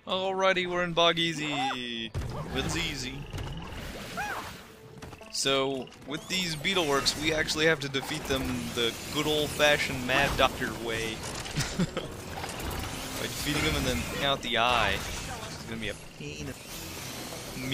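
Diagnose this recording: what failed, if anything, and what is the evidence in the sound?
Damaged data in a compressed stream, so this is a codec-stage fault: a brief blip at 10.45 to 10.47 s. Some bytes there were corrupted, the decoder misread those frames, lost sync and hunted for the next valid frame header before carrying on.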